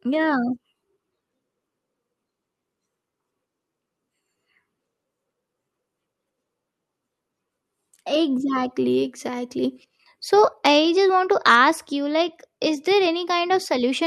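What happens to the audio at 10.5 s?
At 10.53 s the whole signal, speech and background together, drops by about 2 dB in one step, just before "I just want to". That's a microphone volume stepped down event, likely the call software trimming the mic's input level after judging it too hot.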